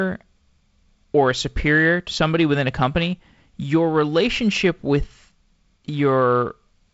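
Listening to this speech, carried over G.722 wideband telephone coding with nothing above about 7.7 kHz, nothing stood out.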